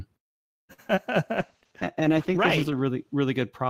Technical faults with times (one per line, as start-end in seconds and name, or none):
0.73-0.80 short stall from a late packet
0.88-0.99 short concealed packet loss
1.37-2.89 call bitrate drop